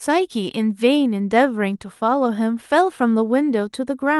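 No technical faults are audible.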